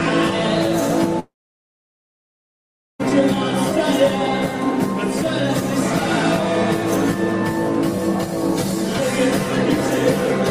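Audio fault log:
1.19–3.01 s, long network dropout: the sound breaks off at 1.19 s and the last fragment is stretched into a short buzzy tail that dies away within about a tenth of a second, leaving roughly 1.7 s of silence. Audio resumes at 3.01 s further along, with about 1.8 s of material simply gone. This likely reflects a stall in packet delivery, where the receiver could only extend and fade what it last had before giving up.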